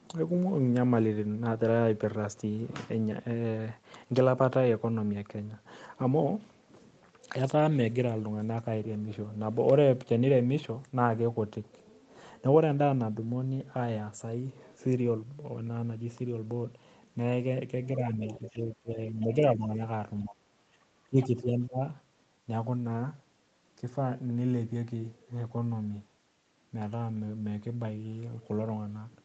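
At 18.28 to 18.57 s there's a faint scrap of a second voice sitting well under the talker, about 20 dB down. That's the other side's voice leaking through, most likely loudspeaker echo the canceller didn't fully remove. From 18.38 to 19.8 s the talker dips by up to about 15 dB, then again at 20.24 to 20.48 s with a deeper drop of about 25 dB, and at 21.07 to 21.81 s by about 20 dB. It sounds like the voice ducking and chopping out. That's speech suppressed in double talk, likely the canceller turning everything down while both sides were talking. A brief burst of the other side comes through again at 21.22 to 21.26 s, a bit louder this time, about 15 dB under the talker. The 8 kHz top end is just the Opus call path at 32 kbps.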